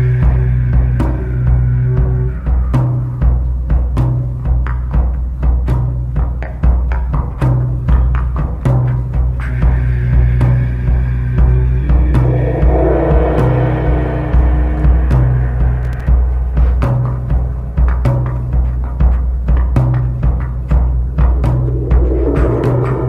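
From 15.83 to 16.07 s there's processor overload crackle: about seven short buffers missed their deadlines, each replaying stale audio with hard edges, giving a gritty tearing burst.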